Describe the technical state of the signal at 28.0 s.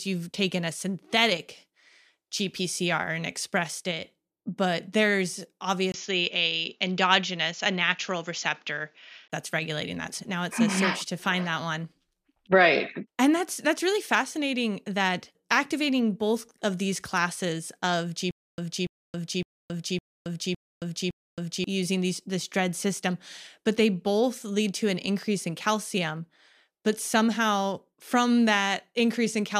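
At 28.0 s the speech signal is intact, with no fault to be heard at that moment.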